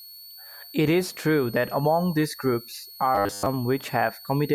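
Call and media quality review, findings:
Switching supply whistle, whole clip. Thin high tone, wandering between 4.33 and 4.47 kHz, sitting around 20 dB below the speech. Probable component: switching power supply near the capture chain. Mechanism: regulator running in an audible burst mode, or beating against another supply. Pitch drifts as the load shifts. Check supply filtering and grounding.

Robotic sound from repeated short buffers, 3.15 to 3.46 s, right after "that among these groups". Speech collapses into a rigid metallic buzz at 100 Hz, loosely tracking the syllables. Likely cause: starved audio buffer. Repeats of the last 10 ms of audio fill the gaps, and most of the real signal in that span is skipped. The repeat period imposes the fixed pitch. Check scheduling and jitter buffer depth.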